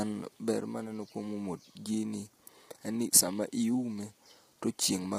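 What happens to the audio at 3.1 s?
At 3.1 s, as across the whole clip, the speech sounds rough and grainy, with noise between harmonics and a thin, synthetic top band. The likely cause is low-delay AAC compression, whose short frames resolve pitch poorly, at a bitrate that sounds near 24 kbps. Grain rather than swirly smearing sets it apart from long-frame codecs.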